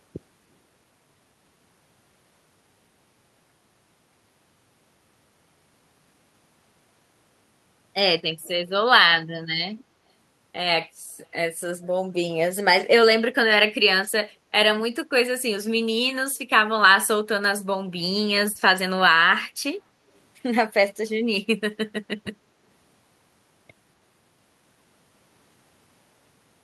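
At 8.43 to 8.48 s a brief echo leak appears: a faint scrap of the speech returns about 0.25 s (246 ms) after the original, very quiet, roughly 30 dB below the voice. The likely cause is a far-end loudspeaker whose echo canceller let some of its microphone pickup through. On a spectrogram it shows as a thin, faded repeat of the preceding speech's harmonic pattern, shifted right; the waveform shows only a tiny low-level ripple.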